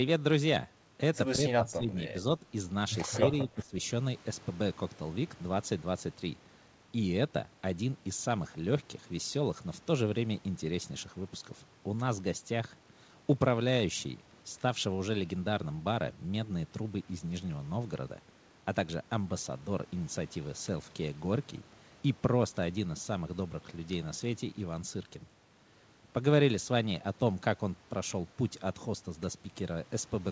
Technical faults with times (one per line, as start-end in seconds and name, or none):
1.42-2.14 speech suppressed in double talk
3.21-3.75 speech suppressed in double talk